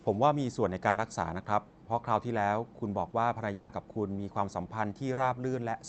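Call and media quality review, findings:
Burst of packet loss, 0.89–0.97 s: about 60 ms of audio replaced by a held, fading continuation, then a jump ahead. The spectrogram shows a smeared, frozen stretch and the waveform a decaying envelope.

Long network dropout, 3.53–3.71 s: about 160 ms missing, filled throughout by a fading continuation with no silence. The spectrogram shows a stretched, blurred band before the audio resumes. Likely a jitter buffer concealing a network outage.

Short concealed packet loss, 5.13–5.19 s: a brief smear where about 40 ms was synthesised. There is a short flat patch on the spectrogram.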